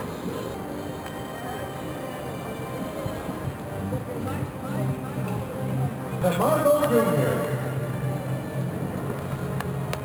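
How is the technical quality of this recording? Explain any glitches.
There's one issue, and it runs the whole way through: imaging from sample-and-hold upsampling. Going from 11 kHz to 48 kHz by just repeating samples left mirror images about 21 dB down, starting around 5.5 to 11 kHz, so there's a metallic fizz that follows the sound.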